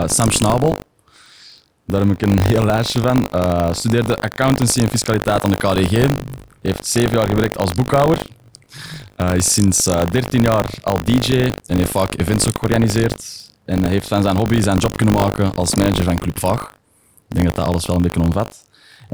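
Throughout the speech, buffer tearing: the writing program and the playback hardware have slipped, so each period splices in a small slice of audio from roughly 70 ms earlier between hard joins. This makes a steady 50 Hz robotic buzz, which points to 20 ms periods, heard only while sound is present.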